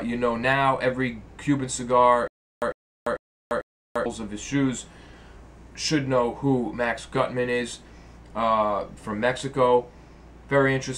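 From 2.28 to 4.06 s, stutter with silent gaps: a 102 ms burst repeats four times between 344 ms silences, likely a stalled stream.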